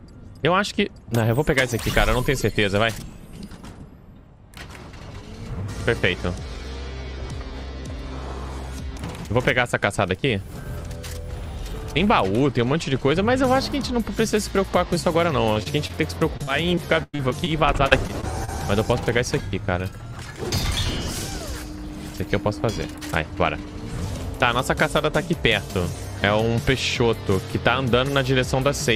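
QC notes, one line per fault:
15.53–15.57, 15.63–15.67, 15.87–15.91 s: short concealed packet loss. About 20 ms missing each time, bridged by extending the preceding sound, heard as brief smears or wobbles.
16.37–18.50 s: repeated packet loss (robotic sound). Thirteen gaps totalling about 0.4 s, longest 103 ms, each patched by continuation, giving choppy, broken-up sound.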